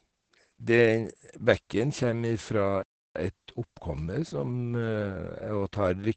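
The clip is speech carrying heavy Opus voice compression from start to finish, and its sound points to the SILK voice coder running at a very low rate, which fits about 10 kbps in wideband mode. SILK models the voice with linear prediction and codes the excitation coarsely at that rate, so the speech comes out muffled, hoarse and slightly robotic. On a spectrogram, energy stops at a hard, flat ceiling near 8.5 kHz, with empty space above it, and the harmonics below look smeared and grainy. At 2.83 s the output stops mid-flow and stays silent until 3.16 s, a playback stall of about 330 ms. It is likely caused by the player running short of data or its thread being blocked. The waveform shows a flat, silent gap over that span, and the spectrogram shows a clean vertical band of silence cutting through the speech.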